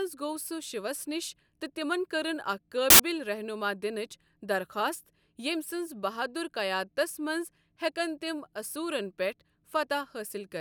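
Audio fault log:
2.90 to 2.99 s, file tags played as audio: a 90 ms hard-edged burst of very loud white noise cuts into the speech, where compressed cover-picture data was read as samples. On a waveform it shows as a rectangular slab. On a spectrogram it is a flat broadband smear with vertical edges.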